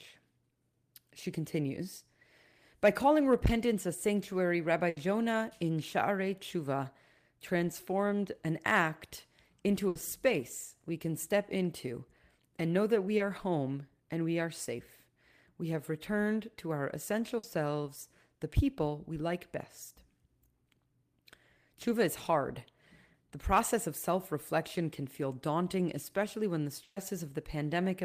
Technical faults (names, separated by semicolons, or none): burst of packet loss; short concealed packet loss